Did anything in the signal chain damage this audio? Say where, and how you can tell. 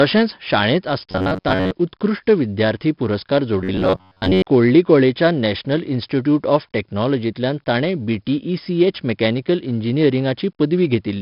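Yes. Across the whole clip the speech carries 4-bit ADPCM compression damage, and heavily: a gritty hiss rides on every loud syllable, and sharp onsets smear because the step size can't grow fast enough. That's the codec stage, with noise tracking the signal level rather than sitting underneath it. The rate points to something around 44 kbps.

Twice the voice turns into a rigid metallic buzz pitched at 93.8 Hz, from 1.11 to 1.72 s and again from 3.61 to 4.47 s, still loosely following the syllables. That's robotic sound from repeated short buffers, likely a driver or buffer underrun, with the playback side looping roughly 10.7 ms chunks while most of the real audio gets skipped. The fixed buzz pitch is one over that loop length.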